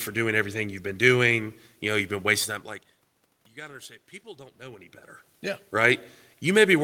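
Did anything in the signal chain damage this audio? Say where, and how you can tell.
No, nothing in the signal chain damaged this audio. The background noise belongs to the room, and the level shifts at around 2.5 and 4.5 seconds are the talker moving relative to the microphone.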